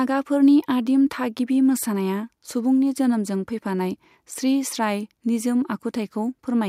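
No technical faults turn up anywhere in this recording, so there's nothing to flag.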